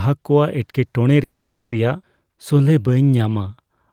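At 1.23 s the speech stops for about half a second, until 1.74 s. The last sound continues as a fading buzz or hiss and then falls silent for roughly 210 ms before playback resumes where it left off. This is a call audio freeze, likely caused by delayed packets draining the jitter buffer.

At 2.02 s there is a skip ahead. Roughly a fifth of a second of speech was dropped while later audio was already queued. The jump lasts about 30 ms, and the two sides are joined almost directly with no real gap.

From 2.24 s to 3.63 s a jitter buffer slow-down stretches the speech to 87% speed at unchanged pitch. Repeated pitch periods and bits of pauses add about 195 ms to rebuild the buffer reserve. Sounds become drawn out.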